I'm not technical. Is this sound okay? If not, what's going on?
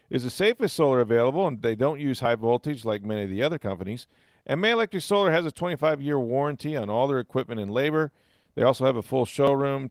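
Yes, this sound is okay: nothing is going wrong with it.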